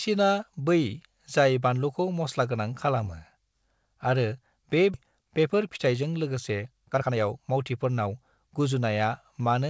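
A speech recording, carried over a call path whose G.722-style coding leaves nothing above 8 kHz. At 4.94 to 4.96 s there is a skip ahead. About a second of speech is missing. Playback jumps forward with no silence filling the gap, so the two sides join almost directly. The stretch in between was dropped, either on the way or by the jitter buffer, while later audio was already waiting. From 5.04 to 8.96 s a jitter buffer speed-up follows. The speech runs at about 113% of normal speed with its pitch unchanged, so it sounds hurried. The buffer was still holding more audio than its target. It trimmed short pitch-period pieces again and again, about half a second in total.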